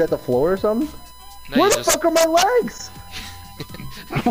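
USB whine runs through the whole clip, from start to finish: a steady, fixed-pitch tone at 1 kHz sitting roughly 25 dB below the main sound. It comes from the USB bus drawing current in 1 ms frames. That periodic pulse of current leaks into the audio path through shared power or ground, so the 1 ms frame rate turns directly into an audible 1 kHz whine that stays constant underneath the audio.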